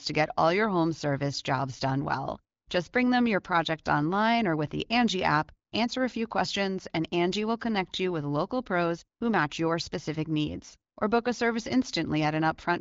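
No audible technical faults.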